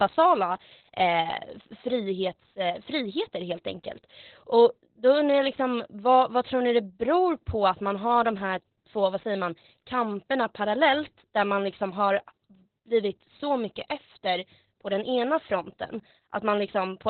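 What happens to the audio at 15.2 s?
Opus voice compression, running through the whole clip and so at 15.2 s too, has narrowed the band to narrowband SILK coding and quantised the excitation coarsely, consistent with roughly 8 kbps. Nothing survives above 4.3 kHz, so the speech sounds muffled, hoarse and slightly robotic.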